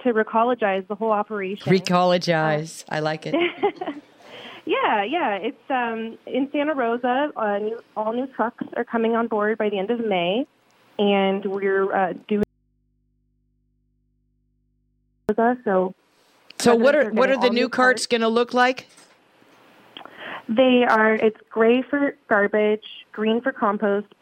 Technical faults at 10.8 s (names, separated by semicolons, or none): none